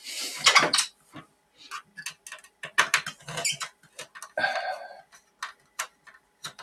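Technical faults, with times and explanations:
Throughout: noise suppressor applied to music or sounds. A suppressor tuned for speech stays active across the whole clip, treating anything steady or slowly fading as background noise and pulling it down, with the loss swinging by around 20 dB. Sharp onsets slip through before it reacts, but sustained parts and decays keep getting squeezed, so the level pumps and flutters and the sound thins. That constant gating-like motion, not a fixed filter or a simple level drop, is what identifies it.
0.91–1.6 s, 2.43–2.62 s, 3.71–4.15 s and 5.02–6.43 s: sound cut by the noise suppressor. In these stretches the suppressor mistakes the material itself for noise and pushes it down further than elsewhere, by about 13 dB at its deepest, about 12 dB in the 3.71–4.15 s stretch. Held and decaying portions sink or have their tails chopped while the attacks mostly come through. 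Unlike a dropout, the sound never vanishes outright, and the loss follows how steady the sound is rather than a clean on-off edge.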